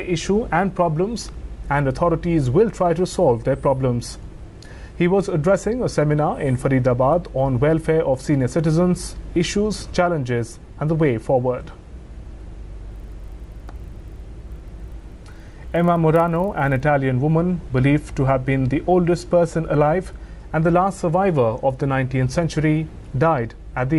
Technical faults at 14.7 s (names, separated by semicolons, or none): resampler restarted on every block